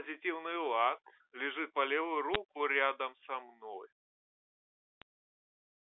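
Around 2.34 s and again at 5.02 s you get short, sharp ticks. Those are bit errors on a digital phone line: a few flipped bits per thousand in the G.711 stream knock single samples way off, so the speech underneath stays intact.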